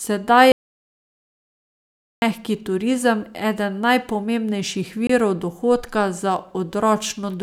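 An audio dropout to silence runs from 0.52 to 2.22 s in this speech recording. The sound cuts off abruptly and returns just as suddenly. The 1.7 s in between is silent, with no room tone at all, so whatever was spoken there is simply gone. That flat, dead silence suggests the input signal was interrupted, likely a disconnected device, a failed link or a momentary mute, while the recorder kept writing samples. A gap between stream segments follows from 5.07 to 5.10 s, falling between "eden najpomembnejših" and "dohodka za". It is a hard-edged hole of about 24 ms that briefly chops the speech without removing any of it. The break comes from timestamps on adjacent segments that don't quite meet, so the player pads the mismatch with silence at the join, which fits a stream delivered in segments of about one second.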